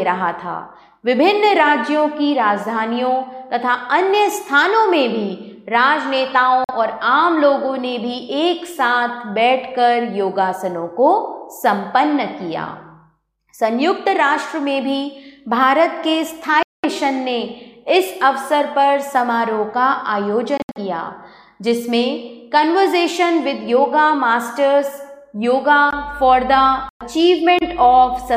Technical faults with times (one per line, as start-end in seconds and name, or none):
6.64-6.71 Bluetooth dropout
16.63-16.85 Bluetooth dropout
20.57-20.78 Bluetooth dropout
26.89-27.02 Bluetooth dropout